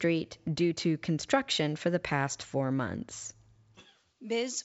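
No technical faults occur at any point in this speech, which carries the band limit of G.722 wideband telephone coding at 64 kbit/s, with nothing above about 7.7 kHz.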